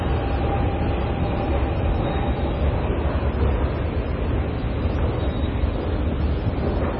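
From start to end the audio has nothing above 5.7 kHz. A spectrogram shows a flat, hard ceiling there, and below it the energy breaks into blotchy patches that blink on and off between frames. This heavy damage is most likely MP3 compression at a very low bitrate, about 24 kbps. With few bits available, the encoder cut the treble and dropped weaker frequency lines, so the sound is dull, watery and swirling. In the waveform, sharp attacks look smeared.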